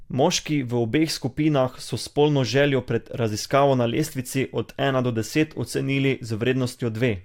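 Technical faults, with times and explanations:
No technical faults are heard in this speech clip.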